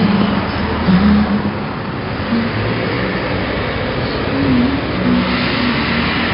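From start to finish the sound carries a gritty, rasping hiss that swells and fades with its loudness, and sharp attacks smear into a brief crunch. Nothing is heard above about 5.3 kHz, so the whole clip sounds dull. This is heavy 4-bit ADPCM compression: each sample is coded as a coarse step from a predicted value, and the step size cannot track fast changes. The damage fits a rate around 44 kbps.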